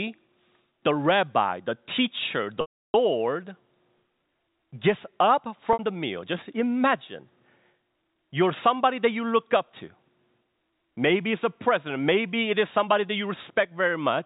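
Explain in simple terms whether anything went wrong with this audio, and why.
Packet loss with pitch repetition: the receiver filled missing audio by repeating its last sound, a brief buzzy hold at 5.73 to 5.79 s and a fade to silence at 2.61 to 2.94 s, rather than an abrupt cut.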